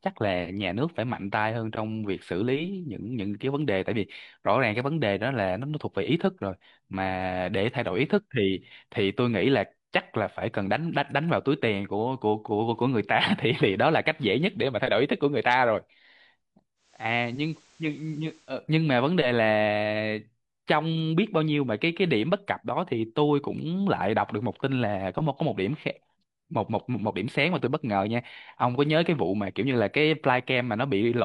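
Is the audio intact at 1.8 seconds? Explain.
Yes, the speech is intact at 1.8 seconds, with no dropout, click, distortion or other fault at that moment.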